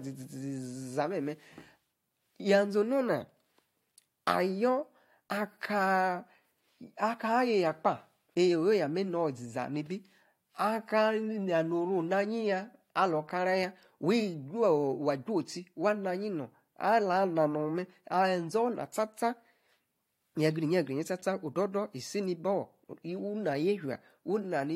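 No technical faults can be heard at any point in this recording.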